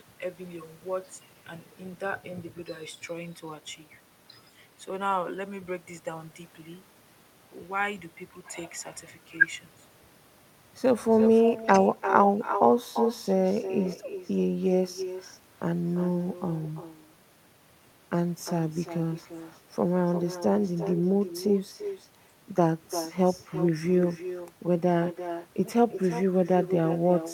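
Echo with no canceller runs through the whole speech recording: a thinner copy, about 11 dB quieter, trails each phrase by roughly a third of a second, because the far end's loudspeaker feeds its microphone uncancelled.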